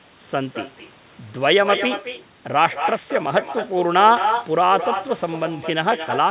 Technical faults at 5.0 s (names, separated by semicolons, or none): echo with no canceller